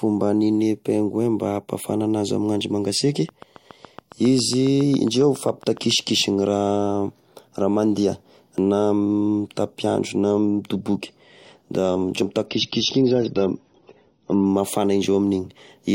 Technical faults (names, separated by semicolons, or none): train of clicks; dropped buffer (overrun); adaptive stream at a lower bitrate